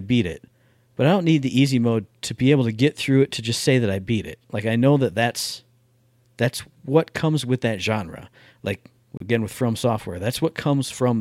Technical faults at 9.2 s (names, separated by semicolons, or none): Bluetooth stall